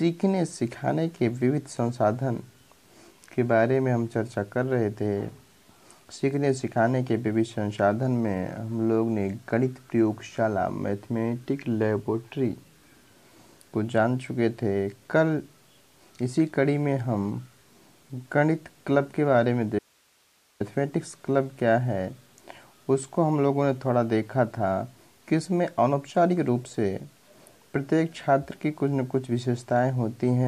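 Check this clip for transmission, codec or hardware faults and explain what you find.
There is one fault, an audio dropout to a faint residue. From 19.79 to 20.60 s the sound cuts out abruptly for about 0.81 s, leaving only hiss around 40 dB below the signal. This is likely a break in the signal feed while the path downstream stayed live and passed its own noise.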